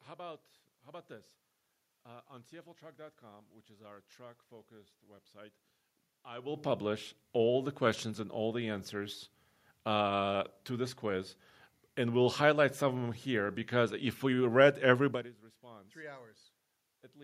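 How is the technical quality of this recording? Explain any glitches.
No technical faults are audible.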